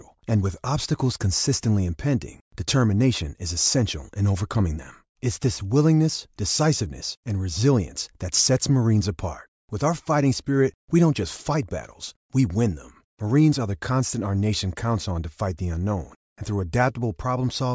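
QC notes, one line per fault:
Nothing wrong turned up in this speech clip, so there's nothing to log here.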